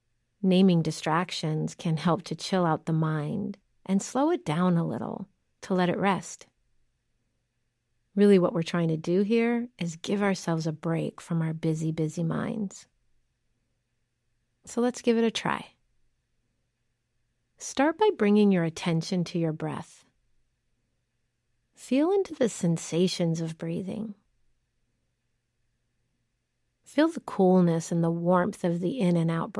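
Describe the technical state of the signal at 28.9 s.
At 28.9 s the signal is intact, with no audible fault at that moment.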